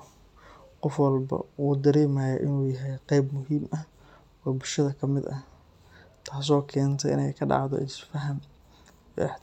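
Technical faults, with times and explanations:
Nothing to flag here; this bit of speech comes through without any technical trouble worth noting.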